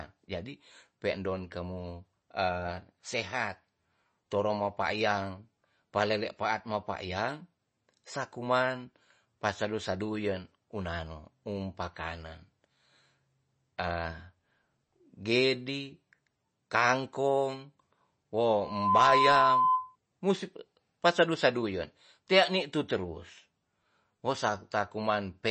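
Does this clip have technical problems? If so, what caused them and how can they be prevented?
Yes. Throughout, the speech sounds watery with plainly audible swirling and nothing above 8.3 kHz, likely MP3 compression at a low bitrate near 32 kbps. Encoding at a higher bitrate prevents this.

From 18.61 to 19.96 s a loudspeaker feedback squeal appears: a 1 kHz tone swells within about a third of a second to roughly 10 dB above the speech. The microphone is picking up its own loudspeaker, and the loop's gain exceeds one at that frequency. Keeping microphones away from loudspeakers, lowering monitor gain or notching 1 kHz prevents it.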